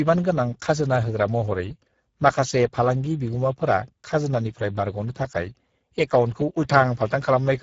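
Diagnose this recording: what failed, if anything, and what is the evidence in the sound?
Codec stage: Speex codec damage throughout, speech plainly hoarse and noisy from starved CELP excitation, which fits about 10 kbps; spectrograms show nothing above 7.7 kHz.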